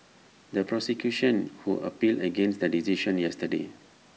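No technical faults can be heard anywhere in the speech. It has the sound of a call's microphone processing, with the lowest bass trimmed away and nothing above 8 kHz.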